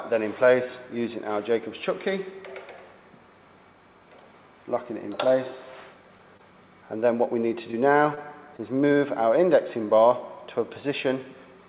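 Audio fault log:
6.37 s, 7.71 s, 8.15 s, 8.57 s: short concealed packet loss. Each time a packet of about 20 ms, which fits one lost packet, arrived too late, and the receiver extended the previous sound to fill the gap. This causes a brief smear. On a spectrogram, the harmonics or noise run on unchanged for that sliver before blending back, all below the 4 kHz ceiling of the call path.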